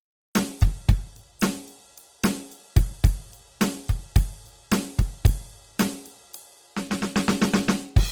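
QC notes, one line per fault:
throughout, Opus compression: grainy, rough music from bands refilled with folded or noise content, likely a low rate near 16 kbps; spectrogram shows speckled texture up to 20.2 kHz.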